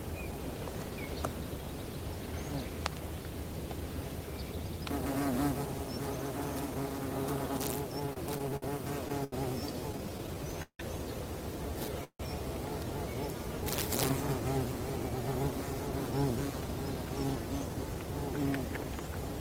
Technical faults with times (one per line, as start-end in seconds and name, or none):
8.00-10.81 repeated stalls (stutter)
12.04-12.21 call audio freeze
14.88-19.39 jitter buffer speed-up